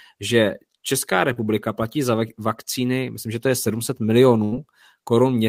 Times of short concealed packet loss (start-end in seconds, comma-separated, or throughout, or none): 1.33-1.38